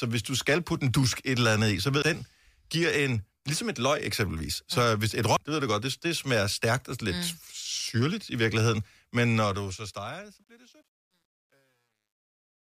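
At 2.02 s, just after "andet i så ved", and again at 5.37 s, after "mm hvis et", there is damaged data in the compressed stream. Corrupt bytes make the decoder misread a frame and hunt for the next header, so each event is a brief glitch while it regains sync. A plain click would not skip ahead.

From 9.32 s the speech fades out, but the fade carries truncation distortion. The gain stage keeps only about 10 bits with no dither, so the quiet tail collapses into coarse steps. From 10.31 s to the end it turns gritty. Broadband hiss would not do this, because this grit rises as the level falls.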